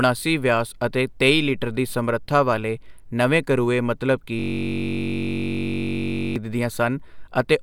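At 4.40 s the speech gives way to a system hang loop lasting until 6.36 s. The computer or driver stalled while the sound hardware kept replaying its ring buffer, so one 21.33 ms slice, which fits a 1024-sample buffer, repeats 92 times. This produces a steady buzz at 46.9 Hz and replaces about two seconds of speech. On the waveform it appears as one short shape tiled exactly. A spectrogram shows evenly spaced horizontal lines 46.9 Hz apart.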